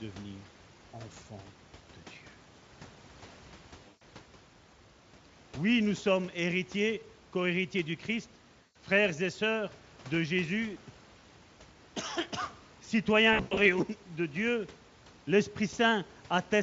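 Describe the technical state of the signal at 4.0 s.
At 4.0 s there's VoIP packet loss concealed by the speech codec, 3.87 to 4.03 s. The decoder stretches its last pitch into a fading, buzzy or noisy smear.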